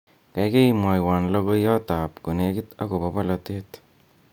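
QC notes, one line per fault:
No technical faults can be heard anywhere in the speech signal.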